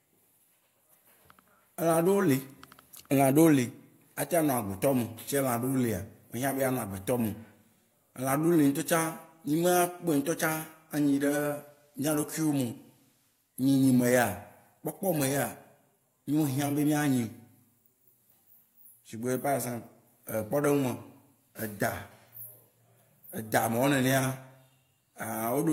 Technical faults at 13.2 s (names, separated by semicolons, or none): digital radio blending to analogue